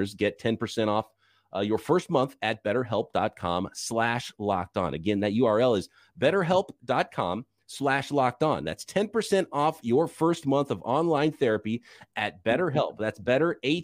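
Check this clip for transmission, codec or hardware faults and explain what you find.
Nothing faulty can be heard anywhere in this speech.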